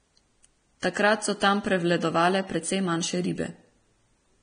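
Throughout, the speech sounds hissy and grainy, with roughened tones, blurred attacks and nothing above 9.7 kHz. This is likely heavy Vorbis compression: the treble is quantised so coarsely that fine detail turns into noise, which points to a bitrate near 24 kbps.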